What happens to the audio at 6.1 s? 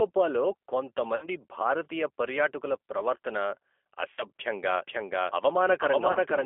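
At about 6.12 s, VoIP packet loss concealed by the speech codec sets in and lasts until about 6.19 s. Around 30 ms of audio is missing, which fits a single lost packet. The decoder fills the gap by repeating its last pitch and filter at falling gain, so the sound smears into a brief buzzy tone or coloured noise that fades. The damage continues after the gap because each frame builds on the previous one. A plain dropout would go silent or click instead.

The same moment lies inside a doubled audio track that began at about 4.75 s and runs to the end. A full-band copy of the sound follows roughly half a second behind at about the same level. It has no decay or room colouring, which tells it apart from a natural echo or reverberation. Its likely cause is a second, slower capture path or an edit that left two copies out of step.

All of this sits under the G.729 codec. At 8 kbit/s the signal is confined to the 300 Hz to 3.4 kHz line band and rebuilt from a vocal tract filter and a few pulses per frame. 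That gives it a plainly rough, synthetic edge throughout. This steady texture is what separates the codec from the sudden, short smear of the concealed packet loss.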